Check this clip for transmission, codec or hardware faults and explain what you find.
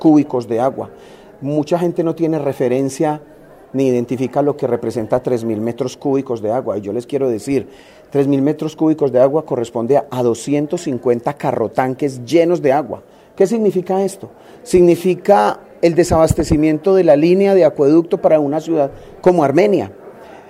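Nothing in the clip points to a transmission, codec or hardware problem. The audio holds steady throughout, with nothing that calls for further attention.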